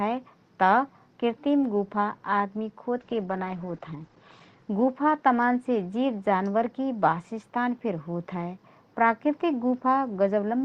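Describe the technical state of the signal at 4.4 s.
At 4.4 s the signal is inside a call bitrate drop running from 2.99 to 5.25 s, beginning just after "कृतिम गुफा आदमी". The Opus encoder's rate falls from 32 to 12 kbps and holds at its lowest for 1.2 s, so the speech is coded more coarsely and the audio bandwidth narrows from 12 kHz to 8 kHz. At this point the speech sounds rough and muffled, with the upper frequencies missing.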